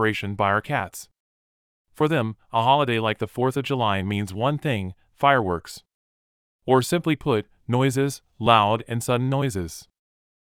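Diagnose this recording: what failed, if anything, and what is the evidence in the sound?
Nothing failed here, as far as I can hear; the speech comes through without any dropout, distortion or glitch pointing to a problem at any stage of the chain.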